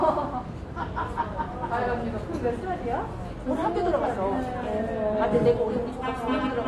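AAC compression is audible throughout the clip: nothing remains above 12 kHz, and the sound is dull and smeared, with a fizzy warble on sustained parts. The likely cause is low-bitrate AAC-LC coding, fitting about 32 kbps, which quantises the spectrum coarsely and leaves holes.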